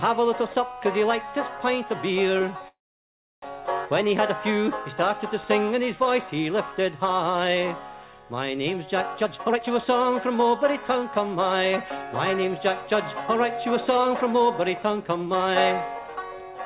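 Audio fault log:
2.68–3.45 s, call audio freeze: the sound briefly trails off, then goes silent for about 0.67 s and resumes where it stopped with nothing lost, likely because delayed packets emptied the jitter buffer.
9.22–12.94 s and 13.35–15.49 s, jitter buffer speed-up: the sound hurries at unchanged pitch, 14% then 7% faster, as the buffer trims pitch-period slices, roughly half a second then 0.15 s, to shed delay.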